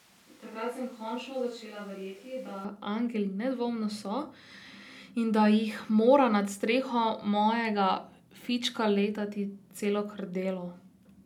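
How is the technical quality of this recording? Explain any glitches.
The opening is the trouble spot. From the very start until about 2.65 s, the speech sounds roomy and hollow, thinner in the bass, about 5 dB quieter, with noticeable background noise. It then snaps back to a close, full sound. That's likely a switch to a distant microphone, with the close mic missing for that stretch.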